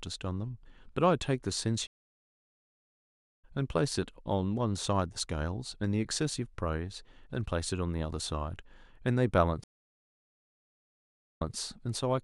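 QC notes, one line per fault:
1.87 to 3.44 s, stream reconnect: the speech drops out for about 1.5 s, then picks up roughly a second and a half further on, so that stretch is simply gone. The connection broke and the player rejoined live.
9.64 to 11.55 s, stream reconnect: another dropout, 1.75 s this time, but it resumes 157 ms earlier, so a short bit repeats. The server resent a burst after the reconnect.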